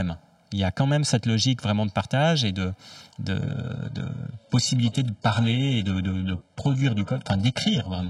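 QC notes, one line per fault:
Throughout: channel delay (comb filtering). One channel reaches the mix about 1.5 ms behind the other, and the two are folded to mono. Components common to both channels cancel at regular frequency intervals, with the first notch around 400 Hz and further notches spaced upward from there. The result is a fixed set of spectral holes across the whole clip, which gives the speech a hollow, phasey colour.
3.40 s to end: adaptive stream at a lower bitrate. Right after "partage et de de", the player switches to a much leaner encoding, most likely because the connection slowed. The sound points to a drop from an AAC-LC 96 kbit/s stream to an HE-AAC 12 kbit/s one. Nothing is left above 11.5 kHz and codec artefacts thicken. The quality changes abruptly, with no gap in the audio.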